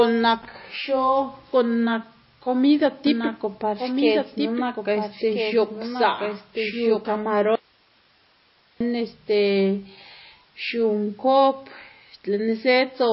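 The speech throughout carries plainly audible MP3 compression artefacts. The sound is watery and swirly, and nothing reaches above 5.6 kHz, which fits a low-bitrate encode of roughly 24 kbps. On a spectrogram this shows as a hard ceiling at 5.6 kHz, with speckled, blotchy energy below it where weaker frequency lines blink on and off from frame to frame. The likely cause is an MP3 encoder starved of bits, zeroing quiet components and cutting the treble. From 3.07 s to 7.05 s there is a doubled audio track: a second, full-band copy of the speech runs about one and a half seconds behind the original at roughly 5 dB lower, with no reverberant tail, and it starts and stops abruptly at those times. A waveform shows overlapping syllable envelopes, and a spectrogram shows the same patterns repeated, shifted in time. This likely comes from the signal being captured twice through paths of different latency, or from an edit holding two offset copies. 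From 7.55 s to 8.81 s, about 1.25 s, there is an audio dropout to a faint residue: the speech cuts out and only hiss remains, roughly 35 dB below the speech. The waveform collapses to a thin band of noise with sharp edges, and the spectrogram shows a uniform wash in place of formants. The likely cause is the wanted signal being lost while the downstream path stayed live.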